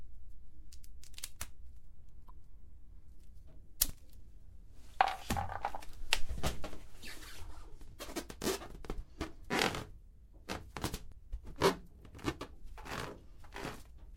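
At 2.28 to 2.30 s and again at 11.12 s, damaged data in a compressed stream makes the decoder lose sync, giving a brief chirp, squawk, click or short hole.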